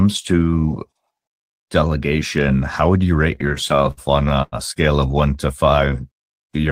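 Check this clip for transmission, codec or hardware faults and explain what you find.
One fault is present: repeated stalls (stutter). Between 3.35 and 4.55 s, late packets emptied the jitter buffer ten times. Each gap was filled by extending the preceding sound, up to 98 ms, about 21% of the span. The speech drags and stutters, but nothing is lost.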